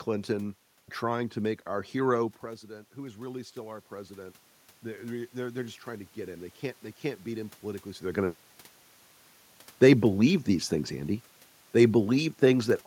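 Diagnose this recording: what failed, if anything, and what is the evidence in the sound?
Automatic gain rising, in call processing. From 2.96 to 6.61 s, after "make our hero president", voice and room noise swell together by about 6 dB.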